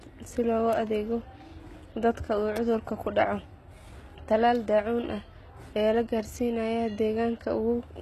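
The speech in this clip has a gritty, metallic treble throughout, with s sounds coming out lispy, and nothing at all above about 12.3 kHz. The damage is plainly audible. This points to HE-AAC compression at a low bitrate, around 16 kbps, as the likely cause. Only the lower spectrum is actually coded, and the upper band is rebuilt by copying lower content upward, so its harmonics no longer line up with the real voice.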